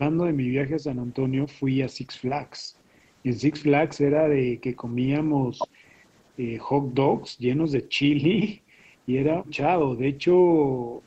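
At 8.55 to 8.73 s, background is gated by the echo canceller. Reacting to loudspeaker playback, it ducks the microphone. Room sound dips about 12 dB.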